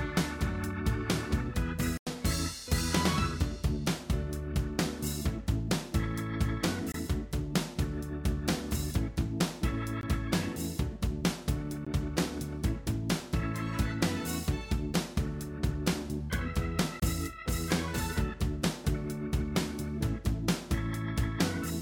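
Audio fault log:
1.97–2.07 s, 6.92–6.94 s, 10.01 s, 11.85 s, 17.00–17.02 s: block of digital silence. The audio cuts abruptly to silence for 15 to 93 ms. The longest gap is a short hole. Three of the lengths fit 1024- and 4096-sample buffers left unfilled.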